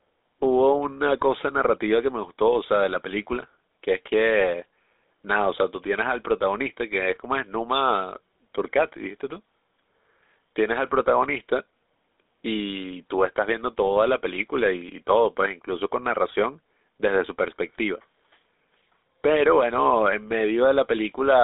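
Throughout, GSM full-rate codec damage makes the speech plainly buzzy and gravelly; the spectrogram shows a 300 Hz to 3.7 kHz band, empty above 3.8 kHz.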